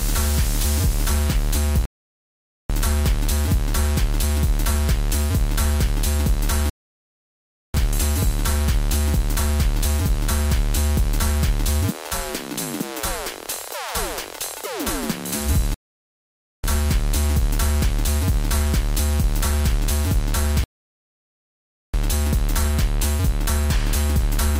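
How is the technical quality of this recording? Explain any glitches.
The playback is interrupted four times by a rebuffering stall. The player exhausted its downloaded audio and paused until more data arrived. Each time the sound drops to silence, then resumes exactly where it stopped, with nothing missing but time added: 1.85–2.70 s (0.84 s), 6.70–7.74 s (1.05 s), 15.74–16.64 s (0.90 s) and 20.64–21.94 s (1.30 s).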